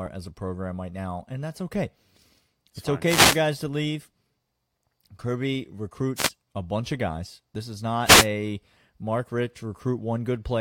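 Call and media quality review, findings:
Wireless microphone noise hits, three bursts of static over speech. 3.04 to 3.40 s, just before "to leave". 6.16 to 6.29 s, just before "a bunch of guys". 8.05 to 8.27 s. Probable component: analogue FM radio link between mic and receiver. Mechanism: reflected paths cancel the carrier. Signal strength drops. Receiver hiss rises until the signal recovers.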